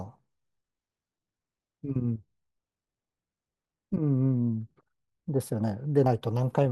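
Speech clip with four abrupt skips at 2.31, 3.72, 4.71 and 6.06 s, each with the sound jumping forward by roughly 10 to 30 ms. No gap of silence separates the joined sides, which points to a likely dropped buffer (overrun) rather than an underrun.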